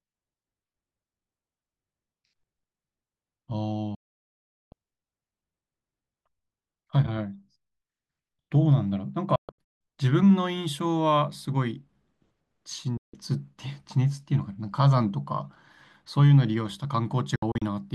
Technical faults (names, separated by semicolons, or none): digital broadcast dropout